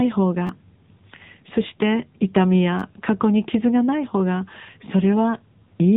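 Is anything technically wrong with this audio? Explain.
Yes, the speech has two problems: low-rate mobile coding throughout, and two brief stutters.

The whole clip went through the AMR narrowband mobile codec. It samples at 8 kHz and rebuilds the voice from a vocal-tract model excited by a handful of pulses per frame. The damage is plainly audible, which fits a low rate near 8 kbps. Nothing above 3.8 kHz survives, so the voice sounds boxed-in and muffled. The sparse pulse excitation gives it a buzzy, synthetic edge.

A repeated buffer occurs from 0.47 to 0.49 s and again from 2.80 to 2.82 s. Each time, fresh audio missed its deadline and the device replayed the last chunk. That chunk is about 10.7 ms long, which fits a 512-sample buffer. It played three times in a row, with a hard join at each repeat, and roughly 20 ms of real audio was lost. Because the chunk is so short, each event comes across as a quick click-like buzz rather than a clear stutter.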